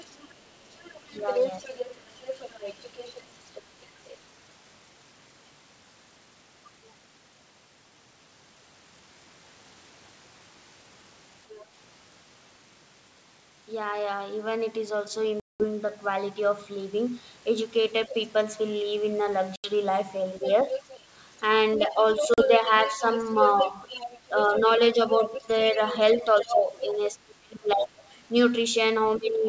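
From the start to 4.17 s a fainter second voice, about 10 dB under the speech, runs beneath it: other side's voice leaking through, likely residual echo the canceller missed. On a spectrogram it shows as a weaker, overlapping harmonic pattern. At 1.2 s the speech briefly dips by about 5 dB for roughly 70 ms, likely speech suppressed in double talk as the canceller turns everything down.

A brief scrap of leaked voice, about 25 dB down, appears from 11.52 to 11.64 s. Packet loss on an ADPCM call then punches hard-edged silent holes of 200 ms at 15.40 to 15.64 s and 80 ms at 19.56 to 19.71 s. These are flat gaps in the waveform. The decoder's predictor loses step, so the speech resumes slightly distorted before settling.

From 20.41 to 26.8 s heavy leakage, only about 5 dB under the talker, overlaps the speech, with a further 40 ms loss at 22.34 to 22.40 s. From 21.78 to 28.03 s double-talk suppression pumps the talker down by as much as about 25 dB, roughly 2 s in total, showing as dimmed, broken bands. 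A final dip of about 15 dB covers 29.17 s to the end.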